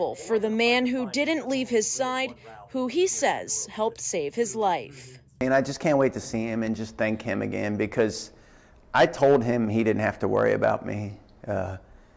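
No technical faults can be heard anywhere in this audio.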